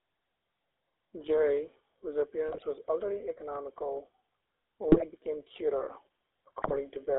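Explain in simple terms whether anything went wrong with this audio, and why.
Two things went wrong. The whole recording has passed through the GSM full-rate codec, the original mobile phone speech coder. It keeps only a rough model of the voice and a coarse buzz to drive it, and it passes only about 250 Hz to 3.7 kHz. That is why the speech sounds narrow, thin and plainly gravelly from start to finish, with the brightness of the voice cut away.

On top of that, there are GSM bit errors in three short bursts: 2.48 to 2.83 s, just before "already economical"; 4.92 to 5.03 s, just before "become cuter"; and 6.62 to 6.79 s. In each burst, a weak radio link corrupted some of the data the decoder uses to rebuild the voice. The decoder then produced the wrong tone and loudness for those moments, so the speech briefly breaks into squawks, pops and gargling.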